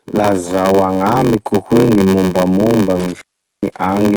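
From start to end, the speech carries two layers of smeared, swirly artefacts. This is likely transcoding between lossy codecs, an AAC stage at 48 kbit/s then Opus at 32 kbit/s. Opus spends bits re-coding the AAC damage and adds its own.

A block size mismatch with padding runs throughout. A steady buzz sits at 93.8 Hz. The stage reading 512-sample blocks receives shorter ones, and the remainder is filled with silence. Each block gains a tiny gap. The speech runs slow, at 0.861 of normal speed, but near its normal pitch.

From 3.00 to 3.78 s there is an intermittent contact. The line opens for about 0.36 s in total. The speech drops out, with crackle at each edge. Faint hiss remains while the connection is broken.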